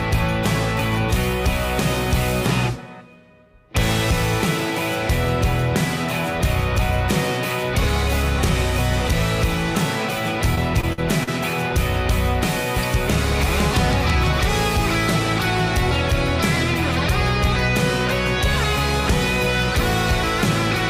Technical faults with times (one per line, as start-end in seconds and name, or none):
10.55-11.29 repeated packet loss (robotic sound)